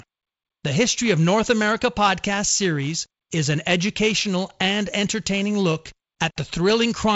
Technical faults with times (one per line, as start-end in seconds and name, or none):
none